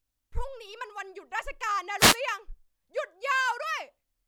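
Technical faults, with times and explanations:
1.98 to 2.17 s, wireless microphone noise hit: a short burst of hissing static, just under a fifth of a second long, rushes over the speech before the signal clears. The analogue FM radio link between microphone and receiver momentarily faded, as reflected copies of the transmission arrived out of step and partly cancelled the direct signal. With less carrier to lock onto, the receiver's own noise rose through the audio until reception recovered.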